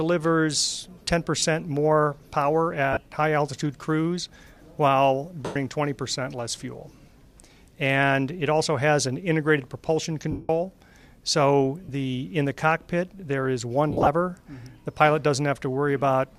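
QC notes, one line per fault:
1.38 to 1.43 s, 2.93 to 2.97 s, 5.45 to 5.56 s, 10.31 to 10.50 s, 11.84 to 11.89 s, 13.90 to 14.07 s: lost LE Audio frames. Gaps last 37.5 to 180 ms. The LC3 decoder fills each gap by replaying the last spectrum with random signs. Tones blur into a noisy smear. After a few frames the fill fades, so the longest gaps sink toward silence. The 37.5 ms gaps fit five 7.5 ms frames. At 13.90 s, 120 ms of loss is scattered over 165 ms. Its longest run is about 50 ms.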